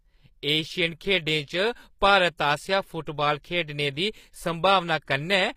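Speech carrying plainly audible HE-AAC compression throughout: gritty, lispy sibilants from likely spectral band replication at a low bitrate near 24 kbps, with copied, smeared treble bands and nothing above 15.5 kHz on a spectrogram.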